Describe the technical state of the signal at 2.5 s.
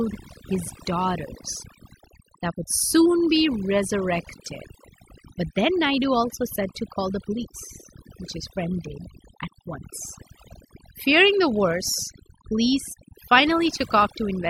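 At 2.5 s the speech is affected by overdone noise removal, which runs through the whole clip. Bands near the noise estimate are pulled down hard, taking soft voice detail with them, so the background drops and breaks up into twinkling specks. A spectrogram shows scattered isolated dots in emptied gaps.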